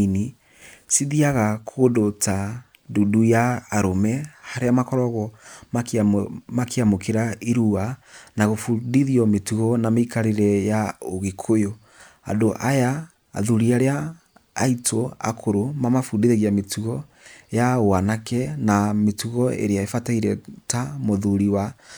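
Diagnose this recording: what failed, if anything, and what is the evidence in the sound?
Nothing in this speech recording points to a failure at any stage of the chain. There are no dropouts, clicks, level jumps or timing breaks to put a time or a mechanism to.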